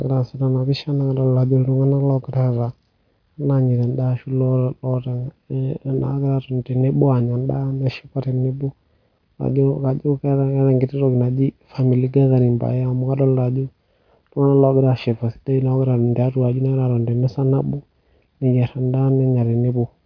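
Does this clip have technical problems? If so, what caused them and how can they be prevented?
No, there are no technical faults to report in this speech recording, so nothing needs preventing.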